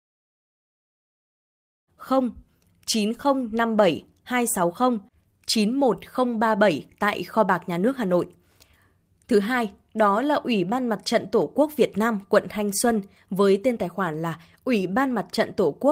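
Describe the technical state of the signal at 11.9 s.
At 11.9 s the speech signal is intact, with no technical fault to be heard at that moment.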